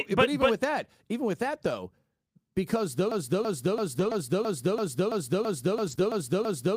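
From 3.12 s to the end, the speech becomes a broken-record loop: one 0.33 s fragment repeats exactly, back to back, and the speech that should follow never plays. The likely cause is a stalled player, encoder or stream.

Within that stretch, at 3.95–4.13 s and again at 5.87–5.93 s, there is a lost packet rebuilt from error correction. Low-bitrate redundant copies, which fits about 100 ms and 40 ms of rebuilt audio, fill those spots without a gap, but they sound rougher and noisier.

At 5.95–5.99 s, short concealed packet loss leaves a brief smear. The decoder extended the preceding sound to cover roughly 20 ms of missing audio, then blended back.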